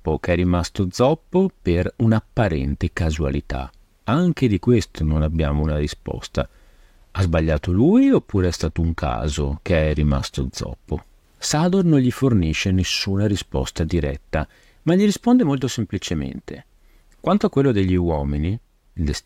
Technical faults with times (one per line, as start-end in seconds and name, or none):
6.99-10.99 adaptive stream at a lower bitrate